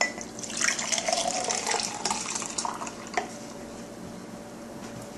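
No technical faults can be heard anywhere in the signal.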